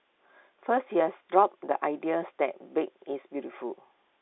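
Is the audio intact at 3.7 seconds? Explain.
Yes, at 3.7 seconds the speech runs intact, with nothing beyond the narrow telephone band of G.711 coding, which carries nothing above about 3.8 kHz.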